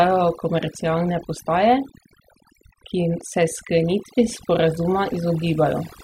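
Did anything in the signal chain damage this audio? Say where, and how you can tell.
Yes. Overdone noise removal in the call processing stage affects the whole clip. A suppressor set too aggressively zeroes bands near its noise estimate, leaving near-silent gaps with twinkling specks. A spectrogram shows isolated flickering dots and hollowed, patchy harmonics.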